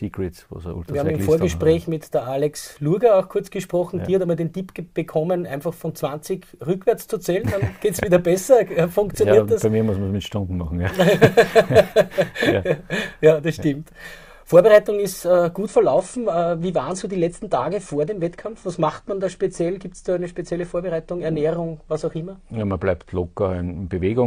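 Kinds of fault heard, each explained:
Adaptive stream at a lower bitrate: at 15.67 s the sound abruptly switches to a coarser encoding and stays there to the end, with no gap at the switch. The player has dropped to a cheaper rendition of the same stream because the connection slowed. From that point codec artefacts increase and the treble is cut, with nothing above 9.8 kHz. This fits a fall from about 96 to about 32 kbit/s AAC.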